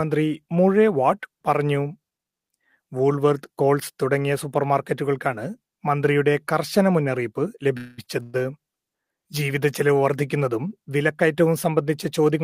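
At 7.77 s a call audio freeze begins and lasts until 8.00 s. For about 200 ms the last sound is carried on as a synthetic buzz that decays without ever reaching silence, and the audio then resumes exactly where it stopped. Nothing is lost, but everything after it arrives about 200 ms later. The likely cause is packets held up in transit, leaving the jitter buffer empty while the receiver fills the wait.

At 8.04 s comes a short stall from a late packet. One packet missed its slot, so the receiver stretched the current sound by about 31 ms until it arrived. The result is a brief held sound with a slight buzz, and nothing is skipped. What separates it from the freezes is its length. It is too short for the fill to decay into a fading tone, so it comes across as a smeared instant rather than a noticeable pause.

A second call audio freeze runs from 8.23 to 8.36 s, filling about 110 ms with the same fading buzz before playback picks up again with no content missing. 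Together the three events push the audio roughly 340 ms later than where it started.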